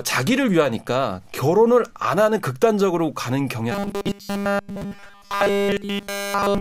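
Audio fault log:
3.72–6.61 s, robotic sound from repeated short buffers: the speech turns into a rigid, metallic buzz fixed at 200 Hz that only loosely tracks the words to the end of the clip. This likely comes from starved playback looping the last 5 ms chunk in place of the skipped audio throughout that span. A spectrogram would show flat, evenly spaced harmonics at multiples of 200 Hz, and the waveform would show short 5 ms cycles repeating.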